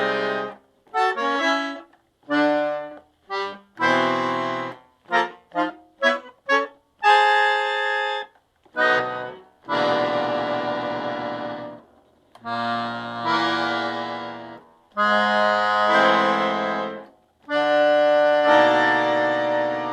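At 8.99 to 9.01 s a skip ahead drops about a second of sound, joining both sides almost directly as audio is dropped while later audio is already waiting. Jitter buffer speed-up follows at 11.85 to 13.21 s (121%), 14.89 to 15.83 s (113%) and 17.25 to 18.15 s (112%): pitch-period trimming to shed excess delay makes the sound hurry at unchanged pitch.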